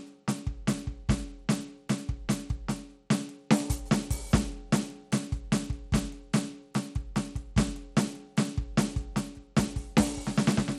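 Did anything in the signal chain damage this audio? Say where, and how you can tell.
Yes, at the codec stage, throughout the music: the treble flickers and thins, a gritty noise rides on it, and nothing reaches above 16.8 kHz. That points to likely Bluetooth SBC compression at around 96 kbps, where coarse sub-band quantisation leaves grit rather than the swirly pre-echo of perceptual codecs.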